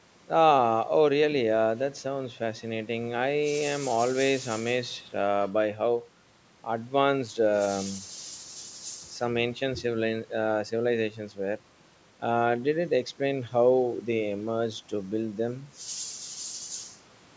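The speech carries no technical faults: it has passed through a call's microphone processing, whose high-pass filter trims the lowest bass as intended, and the audio reaches no higher than 8 kHz.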